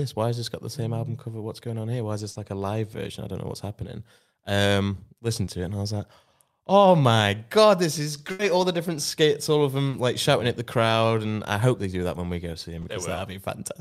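Short concealed packet loss at 2.31, 5.45, 9.89 and 12.81 s: gaps of 40, 20, 40 and 20 ms in the speech arrived too late to decode. The receiver extended the preceding sound across each gap and blended back, leaving a brief smear or wobble where a consonant may drop out.

Burst of packet loss at 8.31 s: about 80 ms went missing in one run. The receiver carried the last sound forward while fading it, heard as a held buzz or dying hiss, then the speech picks up further along with that stretch gone.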